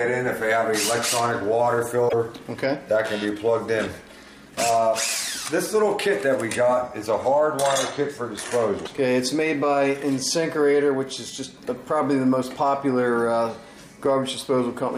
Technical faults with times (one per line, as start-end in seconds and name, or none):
2.08-2.13 broken MP3 bit reservoir
8.84-8.88 broken MP3 bit reservoir